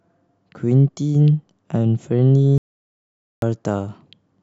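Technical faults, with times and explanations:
2.58–3.42 s, audio dropout to silence: the input feed was likely cut off for about 0.84 s while recording continued, so silence was written in place of signal. The speech stops abruptly into dead silence with no room tone, then resumes mid-flow, and whatever was said in that gap is lost.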